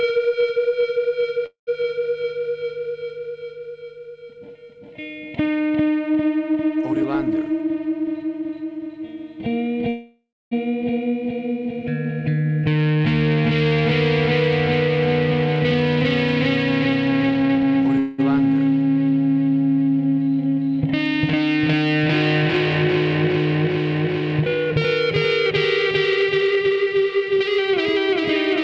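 At 1.46 to 1.69 s, 9.89 to 10.53 s and 17.99 to 18.20 s comes a call audio freeze, likely from delayed packets draining the jitter buffer. The last sound is extended as a fading buzz or hiss, reaching silence for about 120 ms in the first and 240 ms in the second. The audio then resumes where it stopped, inserting gaps of 210, 626 and 192 ms.

A jitter buffer speed-up runs from 6.92 to 9.24 s at 108%, 14.89 to 17.99 s at 115% and 24.20 to 28.10 s at 108%. Repeated removal of short pitch-period pieces, about 0.2, 0.5 and 0.3 s in total, makes the audio sound hurried at unchanged pitch. Throughout, the call path carries nothing above 8 kHz.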